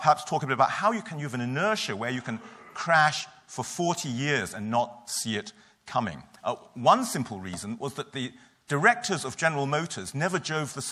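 Nothing here catches the ear as a technical fault; the audio just runs along steadily with no glitches, dropouts or odd jumps anywhere.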